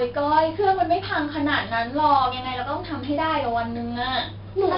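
A gritty hiss rides on every loud stretch of the speech from start to finish, with roughness on sharp onsets and nothing above 5.4 kHz. This is heavy 4-bit ADPCM compression: each sample is coded as a coarse step from a prediction, and the rate points to roughly 44 kbps.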